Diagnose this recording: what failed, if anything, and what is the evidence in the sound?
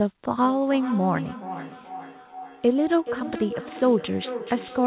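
The failure is in call processing: a feedback echo between two devices. A second device on the same call is playing this microphone's audio back into the room, and the microphone picks it up again. Each device's echo canceller only removes its own playback, so this loop is never cancelled. From 0.42 s to the end, each stretch of speech returns after roughly 0.4 s, band-limited to 4 kHz like the call audio itself, and reaching about 12 dB below the direct speech.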